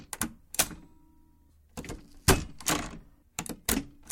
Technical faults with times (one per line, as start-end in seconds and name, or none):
0.71-3.44 clock slip clicks